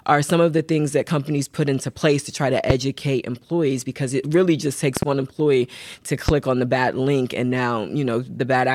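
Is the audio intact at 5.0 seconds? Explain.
No. A loud pop, in fact two in quick succession, sits at 4.97 to 5.05 s, between "because it really just" and "one employee to", well above the speech level. A sudden voltage pulse, likely from a switch, plug or static, was added on top of the speech.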